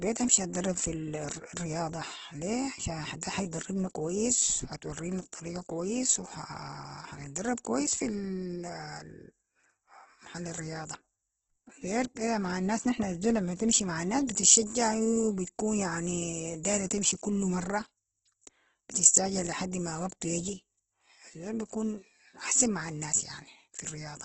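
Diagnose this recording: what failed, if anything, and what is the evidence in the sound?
The codec stage shows Opus compression: the speech sounds grainy and rough throughout, with nothing above 8.2 kHz, likely from CELT-mode encoding at a very low bitrate.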